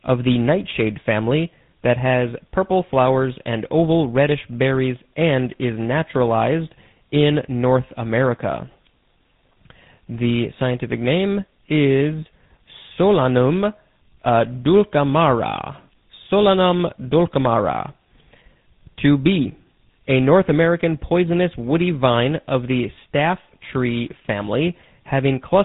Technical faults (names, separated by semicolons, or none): tandem speech coding